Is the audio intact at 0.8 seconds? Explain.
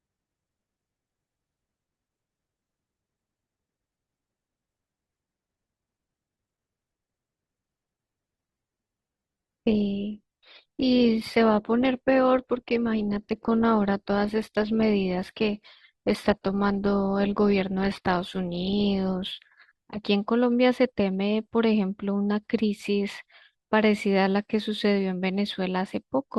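Yes, the audio is intact at 0.8 seconds, with no fault present at that moment.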